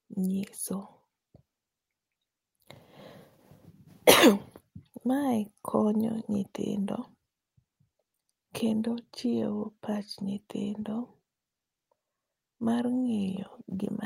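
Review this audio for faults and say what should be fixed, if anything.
No faults are audible in this speech recording, so nothing needs fixing. Listening through it reveals nothing to flag or correct.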